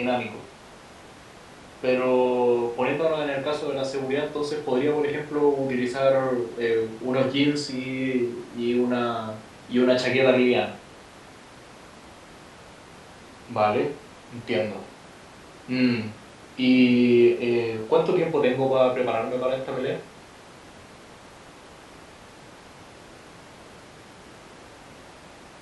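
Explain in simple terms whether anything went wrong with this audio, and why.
Nothing went wrong; no audible faults anywhere in the recording.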